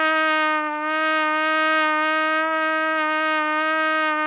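No technical faults can be heard in this audio, which comes through a narrowband call path with nothing above 4 kHz.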